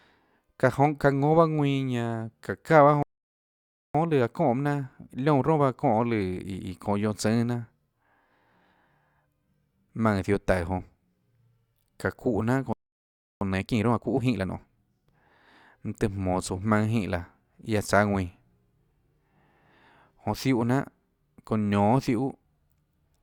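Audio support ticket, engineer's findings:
Playback stall, 3.03 to 3.95 s (0.92 s) and 12.73 to 13.41 s (0.68 s). Speech cuts to silence mid-flow, likely player buffer underrun or blocked thread. Clean gap with no repeated audio, unlike a dropout loop.

Time-compressed catch-up, 3.95 to 6.95 s at 1.15x and 13.41 to 14.77 s at 1.5x. Speech hurried but at normal pitch. Splicing rather than resampling, so no chipmunk shift. Each follows a stall as the player works through its backlog.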